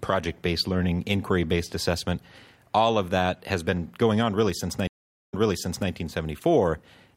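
At 4.87 s a stream reconnect breaks the speech. Silence lasts 0.42 s. Playback then resumes 0.6 s earlier, repeating speech, through 5.90 s.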